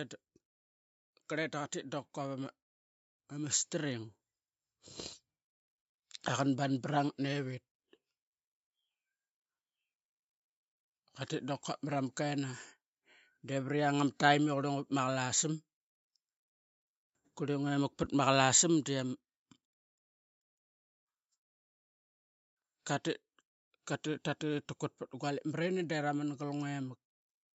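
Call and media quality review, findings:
Automatic gain rising, 2.14 to 6.74 s. Level climbs about 5 dB. Speech and background swell together. Probable component: AGC. Input read as too quiet, so gain was ramped up slowly.

Call microphone processing present: no content above 8 kHz, which fits a 16 kHz sample rate. Low bass trimmed by its high-pass, as expected.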